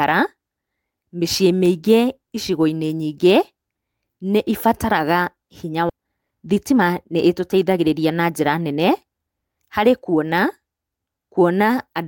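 Skip ahead at 5.89 s: the speech jumps forward with no gap filled in, and about a second of audio is simply gone. Later audio was already queued, and the stretch in between was dropped, either in transit or by an overflowing jitter buffer. The two sides are butted together almost directly, so the talk lurches abruptly from one point to another, and the listening delay shrinks by roughly that same second.

Jitter buffer speed-up from 5.95 to 9.79 s: just after the jump, the speech runs at about 114 percent of normal speed while keeping its pitch. The receiver held more audio than its target and trimmed the excess by cutting out short pieces one or a few pitch periods long, over and over, removing around half a second in total. The result sounds hurried until normal pacing returns.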